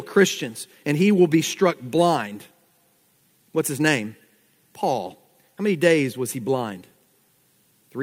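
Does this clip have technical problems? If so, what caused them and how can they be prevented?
No, no technical problems can be heard here.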